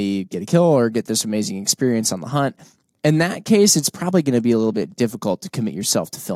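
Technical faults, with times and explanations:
No technical faults can be heard in the signal at any point in the recording.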